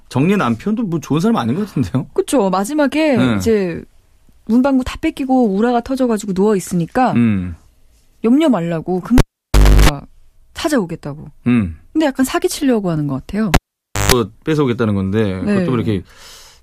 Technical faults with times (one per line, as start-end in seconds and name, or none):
9.18-9.89 cable pulled and plugged in
13.54-14.12 cable pulled and plugged in